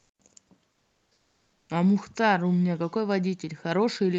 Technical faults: comfort noise in place of the background

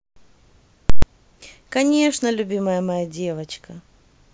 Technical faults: invalid numbers at full scale

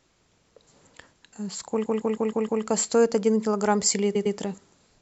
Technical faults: repeated frames

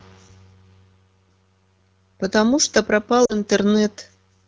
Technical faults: lost AMR speech frames

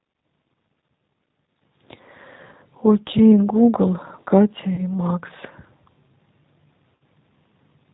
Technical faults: G.729 codec; VoIP packet loss concealed by the speech codec

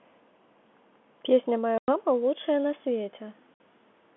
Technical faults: packet loss filled with silence

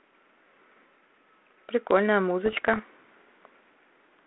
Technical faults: bit errors on an ADPCM link

